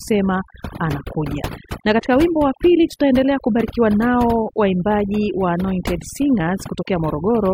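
Overdone noise removal runs through the whole clip. A noise reduction stage was set far too aggressively for the amount of background noise, so any frequency band sitting close to its noise estimate gets pulled right down or shut off entirely. The quieter parts of the voice fall below that threshold and vanish along with the noise. The background drops and breaks up into twinkling specks.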